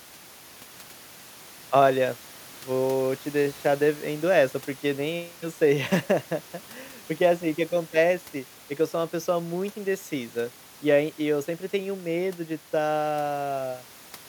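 Listening through this speech recording, nothing stood out as a technical problem, with the room's background noise sitting about 22 dB below the speech.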